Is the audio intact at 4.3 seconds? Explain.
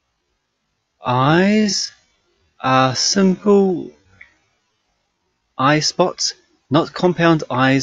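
No. A time-stretched section runs from 0.0 to 5.48 s, slowed to 0.51x. It was likely stretched by repeating short pieces, so it drags before "eyespots not compound eyes".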